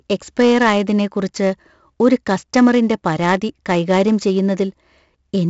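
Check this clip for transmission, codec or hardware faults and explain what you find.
There's one codec fault here, and it runs the whole length of the speech: 4-bit ADPCM compression. Each sample is stored as a coarse 4-bit step away from a predicted value, with the step size adapting as it goes, so the error rides along at a level that follows the signal. You hear that as a gritty hiss clinging to every louder syllable, with roughness on sharp onsets where the step can't grow quickly enough. The damage is heavy. Nothing comes through above 7.7 kHz, which together with the roughly 64 kbps rate fits a 16 kHz sample rate, so the top end sounds dulled too.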